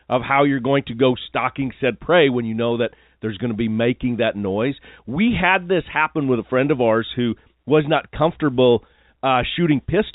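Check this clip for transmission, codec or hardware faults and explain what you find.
No transmission, codec or hardware faults.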